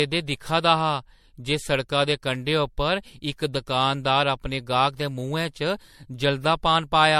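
Generation loss runs throughout the speech, likely from about four passes through a 64 kbit/s MP3 codec. Requantisation piles up swirly smearing and hollowness, with nothing above 16.5 kHz.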